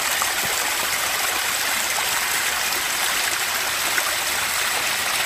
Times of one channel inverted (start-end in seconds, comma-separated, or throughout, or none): none